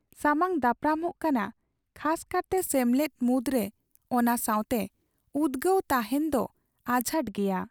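A speech clip in which, from 2.58 s to 7.14 s, pre-emphasis is left on. The treble boost applied before recording or transmission was never undone, so the top end stands about 13 dB higher at 10 kHz than at 1 kHz, a slope that fits the FM 75 µs curve. The sound turns thin, bright and hissy on sibilants. On a spectrogram the band above a few kHz brightens abruptly across that span, and the waveform looks spikier.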